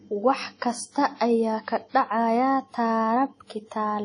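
Throughout the speech, the sound is plainly ringing and washy, with hiss that swells and fades with the signal and nothing above 10.1 kHz. This is likely WMA compression: long transform blocks smear quantisation noise over tens of milliseconds, which fits a bitrate near 32 kbps.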